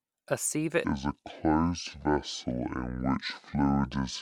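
A speech clip that, from 0.84 s through to the end at 4.21 s, abruptly drops into a deep, dragging register: the voice slows and its pitch falls together, by roughly ten semitones, giving a sluggish, lowered tone that lasts for the rest of the audio. This is a section at the wrong speed, running at 0.571 times its proper rate, with speed and pitch locked together. The likely cause is that portion being played or resampled against the wrong clock.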